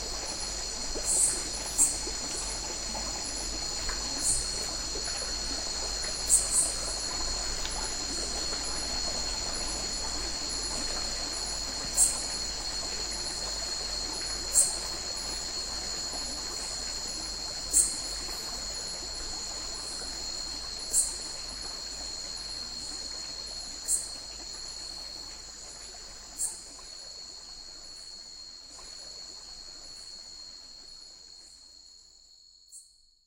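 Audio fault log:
28.69–30.69 s, stream segment repeated: the player queued the same 2-second chunk twice, so that stretch of sound plays again and the clip runs 2 s longer. The waveform and spectrogram show an identical block repeated, with a small discontinuity at the jump back.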